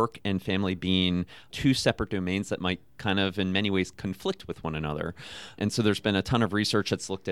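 Speech, with no technical fault anywhere in the recording. No event calls for a time stamp or a cause.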